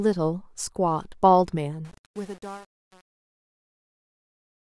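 A gain stage on the fade-out of this speech clip keeps too few bits and adds no dither, which fits a path holding only 7 bits. From 1.85 s to the end at 4.62 s, the fade breaks into gritty, stepped truncation distortion.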